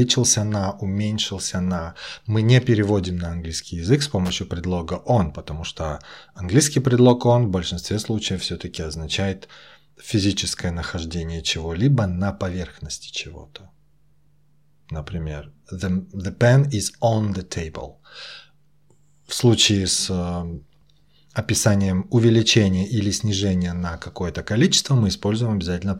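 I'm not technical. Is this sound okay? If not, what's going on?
No, there's one problem. At about 4.25 to 4.30 s you'll hear a quick scratchy burst in the speech. That's loose connector crackle: a worn or dirty plug contact flickering on and off as it moved, chopping up the signal for a split second.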